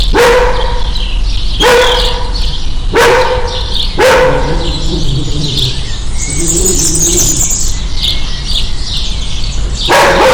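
From the start to the end of the clip, the sounds are pushed about 24 dB beyond what the signal path can carry, producing hard clipping: every peak is sliced flat at the ceiling, with roughly a seventh of the waveform pinned there. Those squared-off tops spray harmonics high into the spectrum, so each loud event turns into a harsh, buzzing fuzz. Unlike soft saturation, which rounds peaks gently and thickens the sound, this edge is abrupt and gritty.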